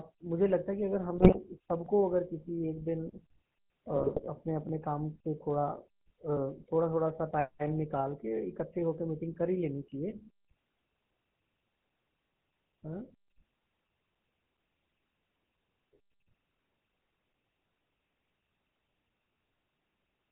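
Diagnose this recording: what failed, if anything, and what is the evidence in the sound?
GSM full-rate codec, present for the whole clip: the codec stage has plainly narrowed and roughened the speech. Nothing survives above 4 kHz, and the voice carries a buzzy, gravelly texture. That fits 13 kbps full-rate coding, which rebuilds speech from a vocal-tract filter driven by sparse, regularly spaced pulses.

GSM bit errors, at 1.18 to 1.45 s and 3.96 to 4.29 s: in the network stage, these bursts break the speech into squawks, pops and gargling. Corrupted bits reached the decoder and scrambled filter, pitch or gain values frame by frame, pointing to an error rate of a few percent.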